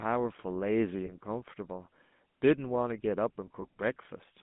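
A speech recording with a buzzy, gravelly roughness throughout, as if heard over an old mobile phone. The top end is gone: the band runs only from about 150 Hz to 3.6 kHz, so sibilants lose their crispness and low warmth is thin. This is the GSM full-rate codec, which fits 13 kbps coding. It models the vocal tract and drives it with a sparse, regularly spaced pulse excitation, producing the plainly audible grainy buzz. Two brief glitches come from lost GSM frames, at 1.06 to 1.12 s and again at 3.62 to 3.66 s. Each is a short metallic, ringing smear where the sound momentarily freezes rather than dropping out. In each case about 20 ms of signal, one frame, was missing, and the decoder filled the gap by repeating the previous good frame's settings. The gaps are short enough that the ring passes quickly instead of fading to silence.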